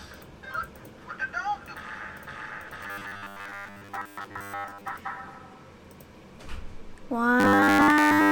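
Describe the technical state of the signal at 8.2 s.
At 8.2 s the signal is inside a stretch of robotic sound from repeated short buffers, running from 7.40 s to 8.31 s. The sound is replaced by a rigid, metallic buzz at 100 Hz. That pitch points to a repeated segment of about 10 ms. The likely cause is new audio arriving too seldom. The playback fills each gap by looping the last short slice, and essentially all of the real audio in this span is skipped.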